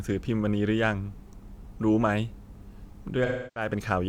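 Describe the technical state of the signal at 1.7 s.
At 1.7 s the speech signal is intact, with no audible dropout, clipping, glitch or other fault at that moment.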